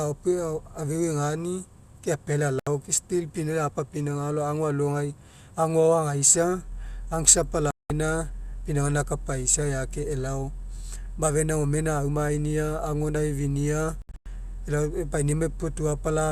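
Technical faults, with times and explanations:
2.59 to 14.26 s, digital broadcast dropout: the speech mutes abruptly three times. The first is at 2.59 s for 72 ms, the second at 7.71 s for 192 ms, and the third from 14.02 s as several short holes scattered over 240 ms, the longest lasting 96 ms. The receiver lost valid frames, or received ones that failed their error check, and held silence until good frames resumed. Whatever was broadcast during those gaps is simply missing rather than distorted.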